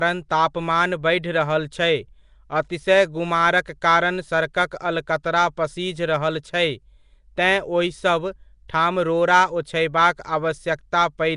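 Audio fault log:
Throughout, Nellymoser compression: the speech carries a rough, hissy halo and a smeared, underwater quality, and the damage is plainly audible. Nothing comes through above about 10.6 kHz. The likely cause is the old Flash microphone codec, Nellymoser Asao, which codes short blocks with a fixed, tight bit budget and fills starved bands with noise. That's what gives the grainy fizz, and the sound suggests roughly a 44 kbps stream.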